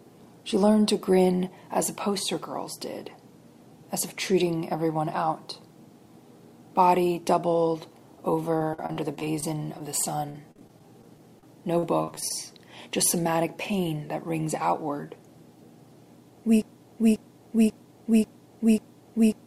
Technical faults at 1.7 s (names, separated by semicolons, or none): none